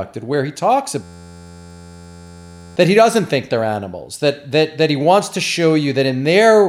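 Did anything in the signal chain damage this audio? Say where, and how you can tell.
Yes. From 1.03 to 2.76 s the speech stops and a steady buzz takes its place. This is a system hang loop at the driver or buffer stage. The same 11.61 ms fragment repeats exactly, giving a buzz at 86.1 Hz, which fits a 512-sample buffer. The computer stalled while the hardware kept replaying that buffer, and about a second and a half of speech was lost. Packet-loss concealment would fade and vary; this loop stays identical until it stops.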